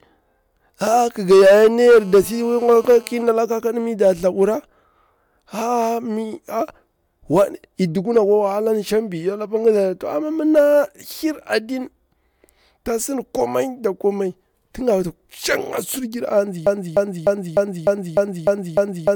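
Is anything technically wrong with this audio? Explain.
Yes, there are two faults.

GSM phone buzz, 1.81 to 3.23 s, between "ƙiga yayar ni" and "ƙakadu mi nda thlabura": a 2G phone near the equipment was on a call, transmitting radio bursts 217 times a second, and the audio circuitry rectified those pulses into the signal path. The result is a hard, raspy buzz at 217 Hz, dense with harmonics and unrelated to the speech. It sits about 27 dB below the speech and holds steady throughout, as a call would produce.

Broken-record loop, from 16.67 s to the end: the player, encoder or stream likely stalled and kept outputting the last fragment it held. A 0.30 s slice of speech repeats exactly, back to back, eight times, giving a stuttering, mechanical cycle instead of continuing speech. Whatever should have been heard in those final seconds is gone, replaced entirely by the repeating fragment.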